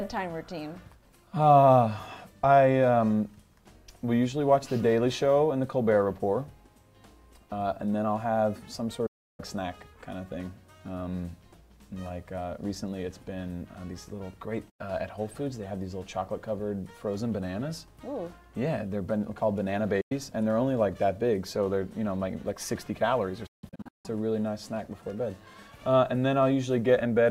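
The sound fades out within about 8 ms and goes silent from 9.06 to 9.40 s, at 14.70 and 20.01 s for about 0.1 s each, and in scattered short holes from 23.46 to 24.06 s. This digital broadcast dropout is the receiver muting over lost or corrupt frames.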